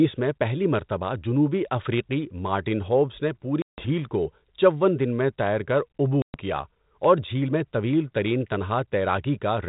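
Speech sent over a 32 kbit/s G.726 ADPCM link suffers packet loss on an ADPCM call twice: a 160 ms hard-edged silence at 3.62 s after "ہوبز نے" and a 120 ms one at 6.22 s after "دن میں تیر کر". Each resumes slightly distorted while the decoder's predictor and step size resynchronise.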